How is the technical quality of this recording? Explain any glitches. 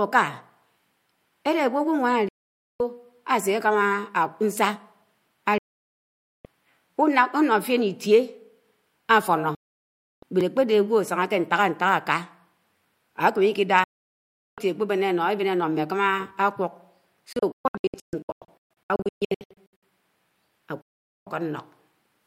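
The recording is marred by repeated reception failures and one tiny digital gap.

Digital broadcast dropouts occur at 2.28–2.80 s, 5.58–6.45 s, 9.55–10.23 s, 13.84–14.58 s, 17.33–19.83 s and 20.81–21.27 s. The receiver lost valid frames and muted, so the speech vanishes with a roughly 3 ms fade and returns later, with the missing material gone for good. Apart from the 17.33–19.83 s stretch, each hole lasts about half to nearly a second. Those lengths step in units that fit 32 ms frames. Between 17.33 and 19.83 s the losses are scattered into several short holes, the longest about 128 ms, adding up to roughly 1.5 s of missing sound. On a waveform each dropout appears as a flat, empty stretch with slightly tapered edges. On a spectrogram it is a blank vertical band across all frequencies, and the 17.3–19.8 s stretch looks like a comb of narrow gaps.

A block of digital silence appears at 10.41 s. 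For about 1.45 ms, which fits a 64-sample block, the output was zeros, likely because the buffer was not filled in time. The abrupt cut to zero and back leaves a brief tick rather than an audible hole. On the waveform it is a tiny flat notch with vertical edges. The spectrogram shows a thin full-height vertical line where the sharp edges spread energy across the spectrum.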